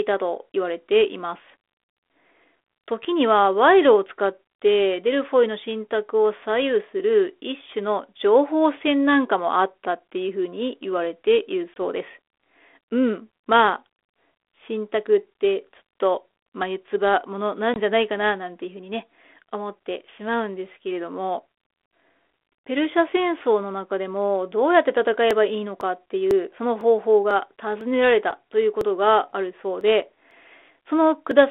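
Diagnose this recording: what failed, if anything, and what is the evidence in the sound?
Network stage: packet loss on an ADPCM call. Around 20 ms of audio, about one packet, vanishes at 11.74 s and again at 17.74 s, leaving hard-edged silent holes in the 32 kbit/s G.726 stream. That codec is limited to 300–3500 Hz. The decoder's adaptive predictor and step size fall out of step with the sender's. After each hole the speech resumes slightly distorted, then settles.

Driver or buffer stage: periodic USB or driver dropouts. From 25.31 s to 31.31 s, something blocks the audio driver every 0.5 s. Each time, roughly a millisecond of audio is skipped outright, about fifteen times in all. The result is evenly spaced ticks that sound only where signal is present.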